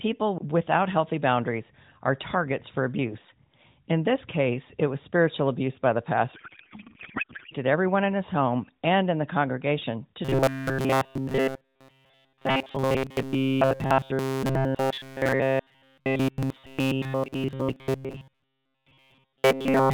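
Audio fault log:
6.34–7.54 s, codec payload misread: right after "spiritual abuse by the", the speech turns into garbled noise and warble that barely tracks it, until "everyone in his home". The pattern suggests octet-aligned AMR frames were decoded as bandwidth-efficient ones, which shifts every field. Unlike a buffer-repeat buzz, it has no steady pitch and barely follows the words.
10.25–19.94 s, robotic sound from repeated short buffers: from "in the congregation to" to the end, the speech becomes a rigid metallic buzz at 133 Hz. That pitch means a stretch of about 7.5 ms is replayed over and over, and this lasts for essentially the whole section. The likely cause is audio arriving too seldom. Unlike the payload misread, the buzz still roughly follows the words.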